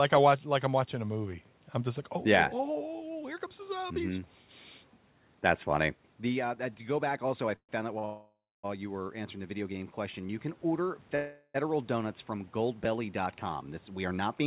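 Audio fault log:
7.56 to 7.71 s, call audio freeze: The sound stops moving forward for about 127 ms. The last fragment carries on as a fading buzz, then about 70 ms of silence, and the audio resumes from where it stopped with nothing lost. This is likely packets held up on the network, leaving the jitter buffer with nothing to play. On a spectrogram the last frame's harmonics smear into flat horizontal bands, confined below 4 kHz like the rest of the call band, and then go blank. The waveform shows a shrinking, repetitive envelope, then a flat line.
7.99 to 8.05 s, short stall from a late packet: One packet was not there when it was due, so the last sound is stretched for about 46 ms and then continues from the same point. The result is a syllable held slightly too long with a faint buzzy quality. A spectrogram shows a brief stretch where the pattern stops changing and the formants lie frozen and level. 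In the waveform it appears as a short run of near-identical repeated cycles.
8.05 to 8.65 s, call audio freeze: This is the longest hold, about 581 ms, and it follows straight on from the stall. The audio is continued as a buzz that decays into roughly 230 ms of silence, then picks up where it left off with nothing missing. The likely cause is a longer delivery delay that drained the jitter buffer. A spectrogram shows frozen bands thinning out into an empty gap, and the waveform shows a tapering envelope, then flat.
11.16 to 11.56 s, call audio freeze: For about 387 ms the last sound is sustained as a fading, buzzy tail that never drops fully to silence before the sound resumes intact. This is likely another run of delayed packets emptying the jitter buffer. The spectrogram shows static horizontal streaks that dim but do not vanish, and the waveform shows a low, steady, repetitive envelope in place of a gap.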